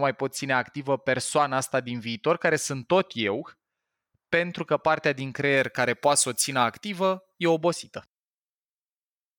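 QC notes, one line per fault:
5.57–7.57 s, pre-emphasis left on: the treble lift applied before recording or transmission was never undone by the matching de-emphasis, so the top end stays raised, about 11 dB at 10 kHz relative to 1 kHz, a shape that fits the 50 µs FM curve. For these two seconds the speech turns thin and glassy, with sibilants spitting forward and the body of the voice sounding lighter against the overbright upper range.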